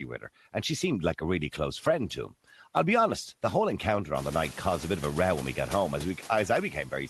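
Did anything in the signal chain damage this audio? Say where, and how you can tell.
Yes, the call processing stage left noise suppressor artifacts throughout the clip. The background pumps with the talking, dropping by about 10 dB in the gaps between phrases and coming back up underneath the speech. It's easiest to hear after the room noise steps up around 4 s, to roughly 19 dB below the speech. The suppressor is ducking the bands it judges to be steady noise frame by frame, so the floor rides along with the speech. The audio's top end stops around 12 kHz, which fits an Opus call link at about 24 kbps.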